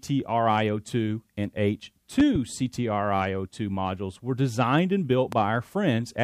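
A sudden voltage pulse, likely from a plug, switch, static or driver glitch, hit the signal path twice and caused a loud pop: two sharp pops from 2.20 to 2.38 s and one from 5.32 to 5.35 s. Each stands roughly 10 dB above the sound, which continues underneath.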